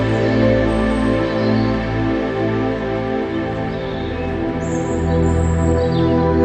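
No technical faults can be heard anywhere in the clip. It passes through a WebRTC call path with the Opus codec working normally, and the top end stops at about 12 kHz, which fits a setting of around 32 kbps.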